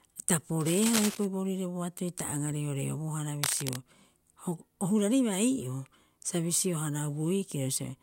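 A worn cable, connector or control being moved is the likely cause here: its contact resistance jumps about erratically, and the result in this speech clip is cable scratch noise, dense ragged bursts of scratching and rustling sitting only a little below the speech. It runs from 0.60 to 1.25 s, just before "boorire boatoi ta aga", and again from 3.43 to 3.76 s, right after "boatoi ta aga reoreobohara".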